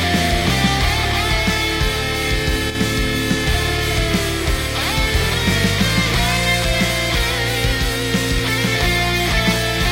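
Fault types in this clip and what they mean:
One channel drops out: from 2.70 to 2.75 s the sound suddenly sinks by about 6 dB for roughly 50 ms, then snaps back. That's likely one stereo side vanishing briefly, so the mono sum keeps only half the shared content and loses whatever lived on that side alone.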